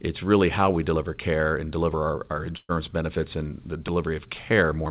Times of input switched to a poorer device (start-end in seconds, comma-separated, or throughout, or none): none